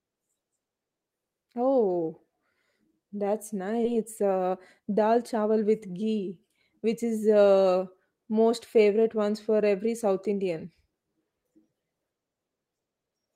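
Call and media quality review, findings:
Skip ahead at 3.85 s: about a second of speech gone, joined with no gap. Queued audio was dropped in transit or by the jitter buffer, so there is no silence or concealment fill as in packet loss.

Jitter buffer speed-up, 3.95–5.65 s, before "with ghee which is": speech about 7% fast at unchanged pitch. Short pitch-period cuts, roughly 100 ms in total, trim excess buffer delay, unlike resampling, which shifts pitch.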